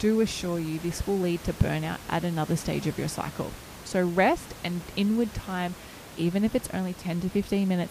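Nothing has gone wrong anywhere in this speech recording; the only thing underneath it is the room's own background noise, sitting about 16 dB below the speech, which comes with the space and isn't a system problem.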